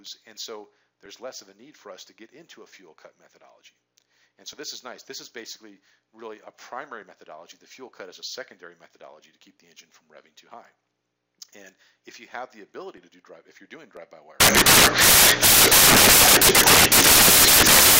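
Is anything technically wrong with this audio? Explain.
Yes. Samples built from the wrong bytes, from 14.40 s to the end: the reader assembles each sample's bytes misaligned or reversed, so low bits dominate, producing loud, harsh broadband noise.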